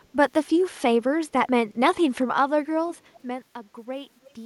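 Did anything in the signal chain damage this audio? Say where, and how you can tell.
Yes: call processing, likely echo leak. Faint copies about 30 dB down, trailing by 299 ms, surface at 3.13–3.19 s and 4.23–4.33 s, delayed repeats rather than reverberant tails.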